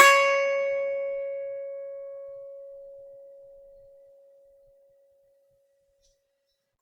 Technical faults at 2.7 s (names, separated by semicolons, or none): generation loss